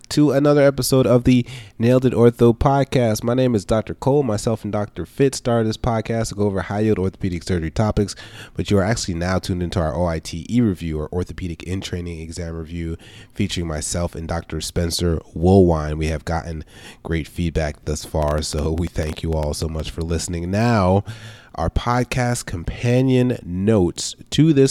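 From 18.23 to 19.81 s, between "gotten great feedback thus" and "for listening", a train of clicks sits over the speech. About fifteen similar pops arrive at an uneven pace, roughly 9.5 per second, peaking about 10 dB above the speech. Nearby equipment interference is the likely cause.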